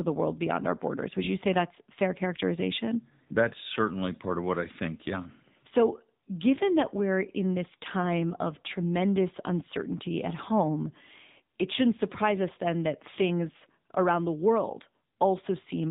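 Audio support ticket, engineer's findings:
AMR narrowband mobile codec, whole clip, 0 to 15.9 s. Speech hard-capped at 4 kHz, buzzy and synthetic. Vocal-tract model rebuilt from a few pulses per 5 ms subframe; damage fits a low mode near 8 kbps and 8 kHz sampling. Unlike a plain low-pass filter, the voicing itself sounds artificial, not just muffled.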